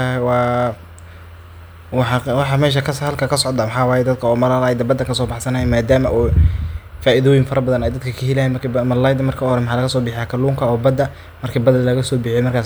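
No audible technical faults.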